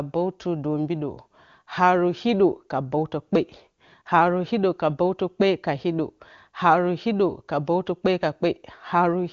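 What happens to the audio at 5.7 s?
At 5.7 s the speech runs on intact, with no dropout, glitch or distortion at that point.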